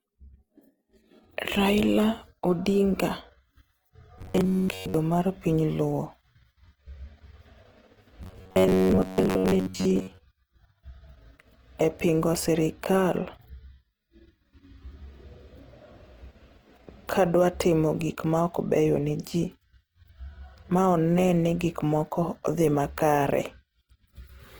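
From the start, the speech has a rough, grainy texture that sounds like Opus compression in its music mode. It likely comes from a low bitrate, around 16 kbps. The encoder keeps the full bandwidth but fills starved bands with noise, so the whole clip sounds coarse.

Then, from 4.19 to 4.94 s, just before "mar piny luo", the voice turns into a stiff metallic buzz. That's robotic sound from repeated short buffers. The likely cause is late audio being covered by replaying a snippet over and over, with most of the real signal skipped. The buzz sits at about 94 Hz, which fits a buffer of roughly 10.7 ms. The same buzz comes back from 8.23 to 10.19 s.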